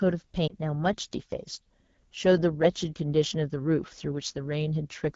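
Right from the start the speech carries the rough, raspy texture of the AMR wideband (HD Voice) codec running in one of its lowest modes, which fits 8.85 kbit/s. At that rate the pulse-driven vocal tract model can't track the voice cleanly, and the damage is plainly audible.

Between 0.47 and 0.54 s there's a brief dip or warble from a lost AMR speech frame, which sounds like a single 20 ms frame. The decoder covered the gap by reusing the previous pitch and vocal tract settings at reduced gain, and the sound comes back weak or rough for a moment.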